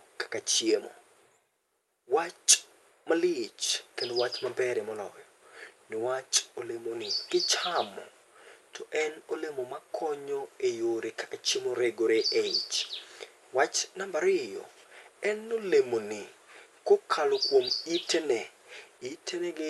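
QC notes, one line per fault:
No technical faults heard.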